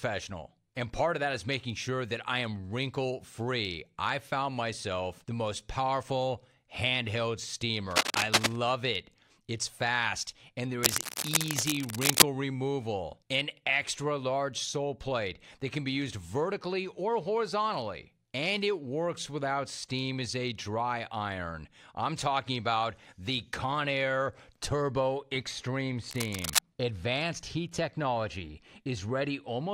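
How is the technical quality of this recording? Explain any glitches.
The speech is marred by three bursts of cable scratch noise. They run from 7.91 to 8.56 s, from 10.83 to 12.23 s, and from 26.10 to 26.59 s. Each is a dense, ragged rustle laid over the speech. The first two sit a few decibels above it, and the last is about as loud. A worn lead or connector being moved is the likely cause. Its contact resistance jumps erratically and injects that crackle.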